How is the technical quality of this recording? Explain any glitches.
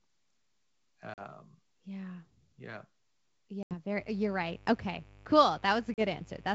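Three dropouts and a mains buzz in the second half make the technical quality poor. The wideband telephone band comes through with full clarity up to about 7 kHz, which fits G.722 wideband telephone coding at its 64 kbit/s rate.

At 1.14 to 1.23 s, 3.63 to 3.74 s and 5.94 to 6.02 s the speech drops into abrupt, hard-edged silence, then comes back with some roughness that settles within tens of milliseconds. This is packet loss on an ADPCM call. About 40 ms of audio is missing in the first and last gaps and about 80 ms in the middle one, which suggests a handful of packets each time. Because ADPCM codes each sample as a change from a predicted value, the receiving decoder's predictor and step size drift away from the sender's while nothing arrives. It takes a short while to lock back on.

From 3.95 s to the end, a steady, raspy buzz sits about 25 dB below the speech. This is mains buzz on a 50 Hz supply. 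Something like a dimmer, rectifier or missing shield lets in sharp switching spikes twice per mains cycle, producing a dense ladder of 50 Hz harmonics that reaches well into the kilohertz range. That is why it sounds gritty rather than like a pure low hum.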